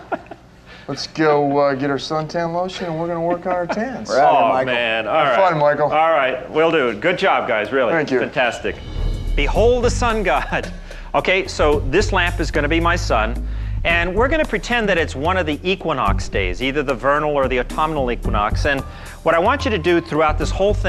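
No technical faults are audible anywhere in this audio.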